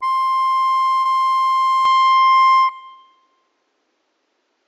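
A music clip with two faults. First, a short concealed packet loss from 1.01 to 1.07 s: about 40 ms of audio never arrived in time, and the receiver papered over it by extending the preceding sound before fading back into the real signal. It comes across as a brief smear in the music. On a spectrogram the gap shows as a short stretch where harmonics run unnaturally flat and steady, and the waveform looks repetitive rather than varied across that span. Second, from 1.85 s to the end the sound turns duller with no gap and no obvious jump in loudness, most likely because the input switched to a poorer device mid-recording. Nothing above 7.6 kHz survives after the change, so the spectrogram shows a sharp ceiling cutting off all upper content at that point, and a faint new noise floor, far below the music, fills the quiet regions.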